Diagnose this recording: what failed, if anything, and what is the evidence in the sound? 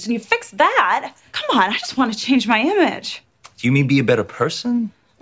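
Nothing failed in this recording, and the sound gives no evidence of any fault.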